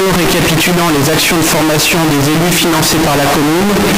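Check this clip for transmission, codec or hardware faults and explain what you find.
One fault runs through the whole clip, from start to finish: a float read as integer. The audio was most likely stored as 32-bit floating-point samples but decoded as 32-bit integers, so each sample's sign and exponent bits, rather than its actual amplitude, decide the output level. The waveform collapses into a near-square shape sitting at an almost fixed, high level regardless of the original loudness. The result is extremely loud and harsh, with quiet background noise pushed up as loud as the main sound.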